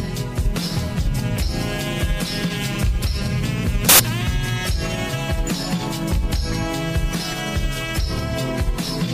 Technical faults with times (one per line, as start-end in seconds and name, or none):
3.89-4.00 samples built from the wrong bytes